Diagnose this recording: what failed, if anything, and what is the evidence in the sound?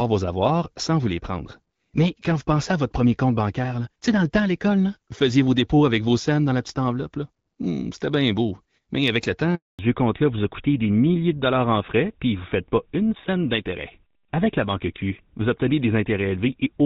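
At 9.55 s, just after "avec le", the speech drops out abruptly and stays silent for 240 ms, until 9.79 s. This is a handover gap at the network stage: while the call moved between networks, no speech frames arrived, so that stretch is simply lost.

From 9.79 s to the end, the speech turns duller and rougher, with nothing above 4 kHz. Before that it had the brighter top end of the AMR-WB HD Voice path, which sounds consistent with about 12.65 kbit/s. This is a fallback to narrowband at the codec stage, after the handover, onto an older codec that fits GSM full rate at about 13 kbit/s.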